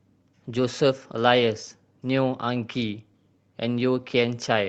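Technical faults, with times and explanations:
Throughout: clock drift between sender and receiver. The sender's clock runs about 4% slow, so the jitter buffer keeps draining and playback has to stretch to fill the gaps.
0.04 to 4.54 s: repeated timing corrections. The receiver keeps repeating small slices, running at 96% speed and adding roughly a fifth of a second overall, heard as faint hiccups and slightly dragging tempo.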